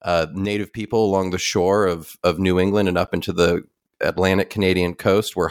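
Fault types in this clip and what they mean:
Sudden gain jump: the speech drops by about 6 dB from 0.45 s to 0.88 s, just before "along the shore of", with the background noise stepping down and back up alongside it, likely from a gain setting applied instantly without a ramp.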